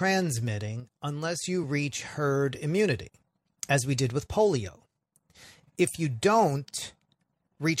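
Speech with two brief level dips, from 0.8 to 1.44 s just before "you reach herd immunity" and from 4.69 to 5.17 s after "as we did with". Each time the sound drops abruptly by about 6 dB and recovers just as sharply. The likely cause is one channel dropping out ahead of the mono sum, and the exact 6 dB step with hard edges sets it apart from a gain fade.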